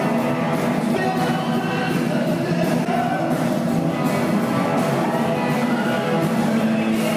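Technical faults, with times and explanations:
0.96–0.99 s, 2.84–2.87 s and 5.03–5.06 s: broken MP3 bit reservoir. Each time the sound jumps ahead with a 30 ms glitch, just over one 26.1 ms frame. Likely cause: dropped frames left the following frames reading their borrowed reservoir data from the wrong bytes, so they decoded as garbage.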